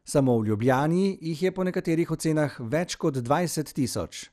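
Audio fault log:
throughout, MP2 compression: the speech sounds dull and muffled, with a gurgling, granular roughness that is plainly audible across the whole clip. This is likely the work of an MPEG Layer II encoder running short of bits, at a rate that fits roughly 80 kbps. It divides the spectrum into 32 equal sub-bands, switches upper bands off when it cannot afford them, and quantises the remaining bands coarsely, so the treble flickers in and out.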